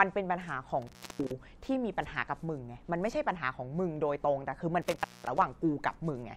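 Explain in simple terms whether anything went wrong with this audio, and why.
Intermittent contact: a loose cable or plug briefly lost its connection twice, around 0.82 to 1.32 s and 4.82 to 5.42 s. Each time the speech cuts out for about a quarter of a second, with crackle at the edges and faint hiss in the gap.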